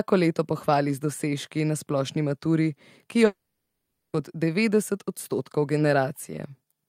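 At 3.25 s the speech breaks off for about 0.9 s, until 4.15 s. The last sound smears into a fading buzz, then about 0.73 s of near silence follows. This is likely a long network dropout. Speech resumes at "kot devetdeset odstotkov", with the gap's content lost.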